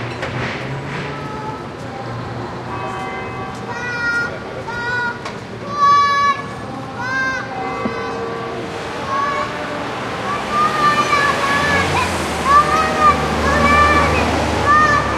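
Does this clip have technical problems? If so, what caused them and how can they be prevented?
No, there are no audible technical problems in this audio, so nothing needs preventing.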